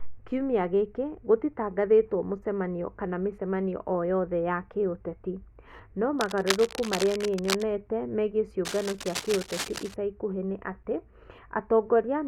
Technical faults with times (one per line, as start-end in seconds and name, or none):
6.19-7.63 cable scratch noise
8.65-9.94 cable scratch noise